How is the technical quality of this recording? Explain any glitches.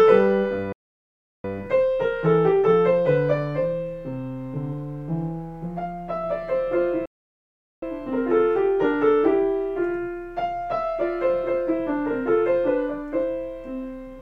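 The recording has two playback stalls. At 0.72 s and again at 7.06 s the sound halts in mid-flow for about 0.72 s and 0.77 s, likely because the player starved of data. These are long, clean silences rather than a short dropout's click.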